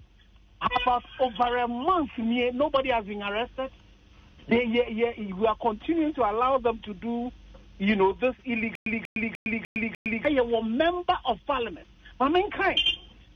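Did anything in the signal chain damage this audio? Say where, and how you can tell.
Yes. From 8.75 to 10.25 s, a stutter with silent gaps: a 189 ms burst repeats five times, each followed by 110 ms of silence. This likely points to a playback or stream buffer stalling and replaying its last fragment.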